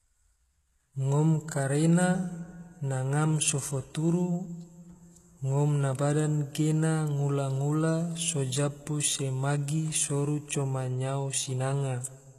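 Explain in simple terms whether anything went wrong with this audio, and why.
From start to finish, the s sounds come out gritty and lisping, and the top end sounds artificial, with nothing at all above about 12 kHz. This is likely HE-AAC compression, which rebuilds the treble by copying lower sounds upward instead of keeping the real detail.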